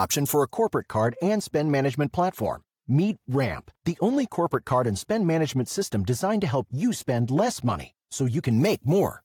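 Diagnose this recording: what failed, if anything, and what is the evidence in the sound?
A treble-cut filter in the processing chain failed: de-emphasis applied wrongly. From 0.51 s, just after "for a", to 8.51 s, the speech turns dull and muffled. The top end slopes away smoothly, about 13 dB down at 10 kHz relative to 1 kHz. The cut either landed on audio with no pre-emphasis to undo or was applied twice.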